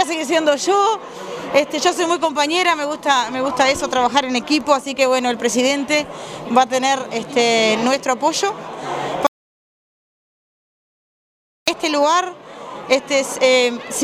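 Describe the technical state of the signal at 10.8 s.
An audio dropout to silence runs from 9.27 s to 11.68 s, so at 10.8 s the signal is silent, with no room tone or noise floor at all. The sound cuts off abruptly and resumes just as abruptly about 2.4 s later, and whatever occurred in that stretch is gone. The likely cause is a momentary loss of the input, such as a disconnected device, a failed link or an accidental mute, while recording carried on writing silence.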